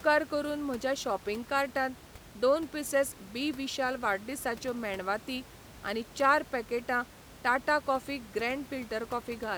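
No technical faults are audible.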